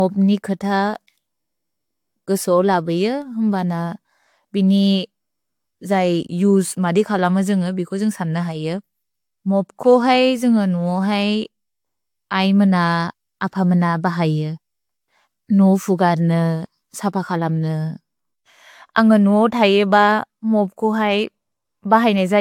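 Generation loss runs through the whole speech clip, from start to end. The sound is swirly and smeared, with a hollow quality. Consonant attacks blur instead of landing crisply. Nothing is present above 19.2 kHz. The cause is likely repeated lossy coding, about three passes, which fits an AAC-LC chain at 96 kbit/s. Each pass quantises again on a shifted frame grid. The noise and spectral holes pile up beyond what one encode would leave.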